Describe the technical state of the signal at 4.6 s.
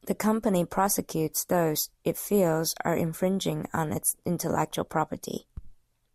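At 4.6 s the speech signal is intact, with no technical fault audible at that moment.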